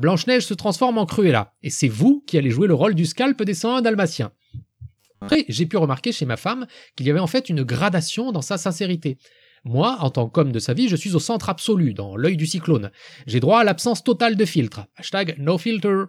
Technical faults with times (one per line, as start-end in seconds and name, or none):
4.96-5.37 robotic sound from repeated short buffers